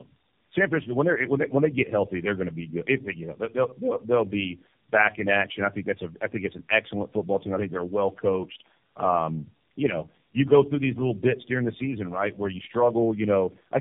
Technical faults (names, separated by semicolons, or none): tandem speech coding